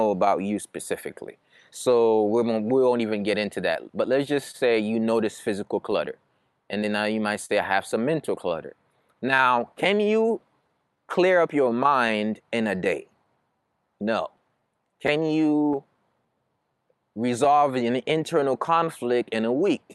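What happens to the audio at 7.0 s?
Scattered short gaps run from 4.51 s to 9.18 s, so 7.0 s falls inside that stretch. About five packets went missing or arrived late, spread singly across those few seconds, and the receiver covered each hole by extending the sound just before it. The patches are brief. The longest is around 40 ms, and together they make up roughly a tenth of a second. They come through as small ticks, smears or hiccups against otherwise clear speech.

Repeated timing corrections are also active at 7.0 s. They span almost the whole clip, from 0.04 s to 19.58 s. The receiver keeps inserting or stretching tiny pieces of audio, all in the same direction, so playback runs at about 98% speed and gains roughly half a second overall. Because these edits are small and unevenly spaced, they are heard as slight hitches or a faintly unsteady tempo rather than as obvious jumps.

Underneath both sits clock drift between sender and receiver, present throughout. 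The sender's audio clock runs about 3% slow relative to the receiver's, so the jitter buffer keeps draining and the receiver has to stretch the stream to stay fed. That shortfall is what drives the timing corrections.

All of this passes through an Opus call path, whose band limit near 12 kHz sets the top of the audible spectrum.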